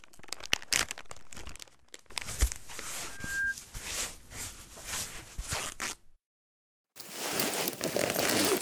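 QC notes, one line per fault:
3.10–3.56 s, loudspeaker feedback squeal: a microphone is picking up the loudspeaker it drives, and at 1.6 kHz the loop gain rises above one, so that frequency keeps recirculating and reinforcing itself. It is heard as a pure 1.6 kHz tone that swells over roughly a third of a second until it sits a few dB above the rest of the sound, then stops at 3.56 s.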